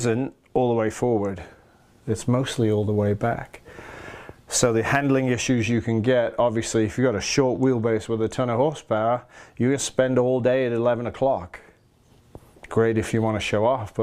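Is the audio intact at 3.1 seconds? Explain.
No. At 3.1 seconds the audio sits inside a stretch of sample clock jitter running from 2.40 to 5.32 s. The converter's timing wobbles by a few microseconds, so each sample lands a little early or late. Steep, fast-moving parts of the waveform suffer most. The resulting error sits roughly 30 dB below the signal. It comes through as a grainy hiss that swells on loud, bright passages and drops away in quiet moments.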